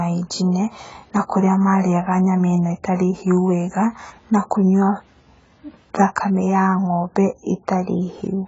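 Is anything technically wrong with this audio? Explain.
Yes. AAC compression runs throughout the speech: nothing is present above 7.6 kHz, and the remaining spectrum sounds patchy, with a swirling, fizzy texture on sibilants and held vowels. The likely cause is AAC-LC coding at a very low bitrate, one that fits roughly 16 kbps, where the encoder discards the top band and quantises the rest so coarsely that gaps open between frequencies, leaving the speech dull, smeared and warbly.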